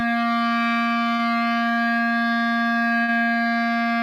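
At 1.15 s and again at 3.03 s the music briefly stalls from a late packet. The jitter buffer ran dry, so the last sound was held for about 34 ms, then 51 ms, before picking up where it left off. You hear a brief smeared hold with a faint buzz or dip, but nothing is lost.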